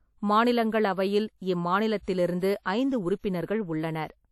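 Short speech recording, and the whole thing carries plainly audible WMA compression damage: a ringing, washy quality with hiss that swells and fades with the speech, and nothing at all above 13.7 kHz. That likely comes from a low-bitrate WMA encode, which fits around 48 kbps.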